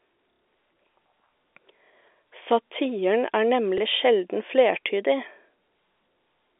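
Packet loss with last packet repeated at 0.33 to 0.42 s, 3.78 s and 6.24 s: missing audio was filled by replaying the previous packet, producing a short robotic stutter in the first and small blips in the other two. The 90 ms gap fits three 30 ms packets. The telephone band comes from G.711 coding.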